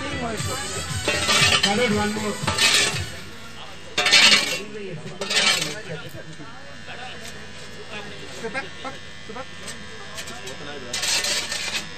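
From start to finish the waveform sits shifted off zero by a constant DC offset of about -38 dBFS. It can't be heard as a tone, but it eats a little headroom. A spectrogram shows steady energy pinned at 0 Hz, and the waveform's centre line is displaced throughout.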